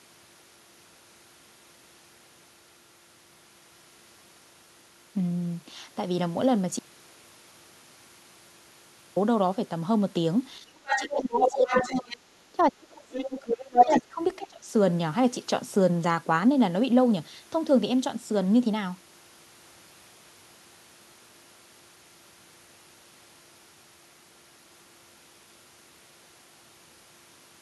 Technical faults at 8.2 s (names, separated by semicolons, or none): audio dropout to silence